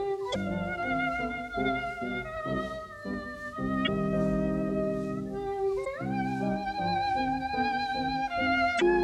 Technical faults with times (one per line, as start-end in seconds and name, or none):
0.30-0.36 damaged data in a compressed stream
3.83-3.88 damaged data in a compressed stream
5.81-5.87 damaged data in a compressed stream
8.77-8.82 damaged data in a compressed stream